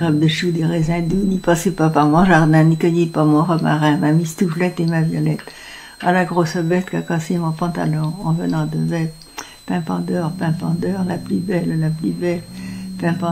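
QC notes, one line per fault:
Throughout: switching supply whistle, a thin high whistle near 4 kHz sitting about 30 dB below the audio, wandering between roughly 3.9 and 4.3 kHz. A switching power supply cycling in an audible burst mode produces this drifting tone.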